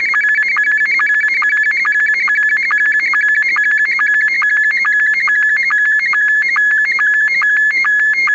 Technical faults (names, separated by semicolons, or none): none